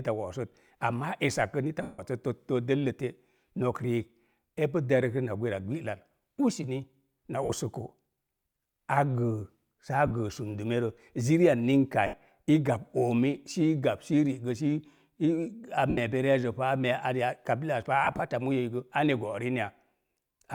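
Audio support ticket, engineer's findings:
Lost LE Audio frames, six dropouts in the speech: 1.82–1.99 s (165 ms, the longest), 7.43–7.52 s, 10.07–10.11 s, 12.06–12.14 s, 15.90–15.98 s, 18.04–18.20 s just before "a moyoi". Bluetooth LE link dropping packets. The LC3 decoder covers gaps by replaying the last spectrum with random signs, so voiced sound smears into noisy hiss, fading on the longer gaps. Dropouts at 7.43 s and 18.04 s are scattered, brief runs within each span. Gap lengths fit 7.5 ms frames.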